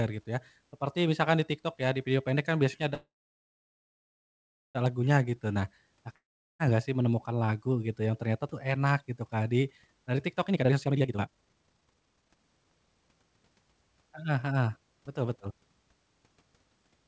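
At 2.94 s, after "pendek kan biasanya kan", a call audio freeze: packets were likely held up, and the jitter buffer ran dry. The last sound fades into about 1.7 s of silence, and the speech resumes at 4.77 s with nothing lost.

From 5.30 to 5.54 s, a jitter buffer slow-down: the buffer repeated pitch periods to rebuild its reserve, adding 42 ms. The speech drags at 85% speed at an unchanged pitch.

At 6.16 s, a long network dropout: audio likely stopped arriving, and 0.44 s was never played. A brief fading tail gives way to silence before "gak sih menemukan lagu" picks up further on.

From 10.49 to 13.37 s, a jitter buffer speed-up: the overfull buffer trimmed short pitch-period pieces, about two seconds in total. The speech sounds hurried at 163% speed and normal pitch, through the G.722 path with nothing above 8 kHz.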